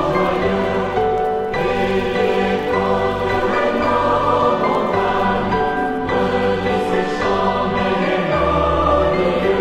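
At 5.25 s the sound abruptly shifts into an adaptive stream at a lower bitrate and stays there to the end. The player dropped to a cheaper version when the connection slowed, with no gap at the switch. The top end thins out, with nothing above about 14.9 kHz. It fits a step down from AAC-LC at around 96 kbit/s to HE-AAC near 24 kbit/s.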